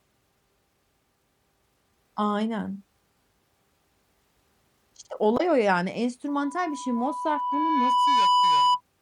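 At 5.34 to 5.41 s, damaged data in the compressed stream makes the decoder lose frame sync, giving a brief glitch in the speech. From 6.28 to 8.81 s, loudspeaker feedback squeal appears: a 990 Hz tone swells over about two seconds to roughly 5 dB above the speech as the loop gain exceeds one.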